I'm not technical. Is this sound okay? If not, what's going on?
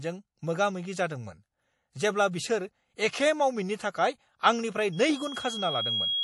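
No. There are two problems.

The speech sounds watery and swirly throughout. The treble is missing, with nothing above about 11.5 kHz. The likely cause is MP3 compression. The file was squeezed hard, so quiet detail flickers away and the top end is cut off.

From 4.92 s to the end, a loudspeaker feedback squeal appears. The microphone is picking up the speaker it feeds. A single 3.3 kHz tone swells over about a second until it is roughly as loud as the speech.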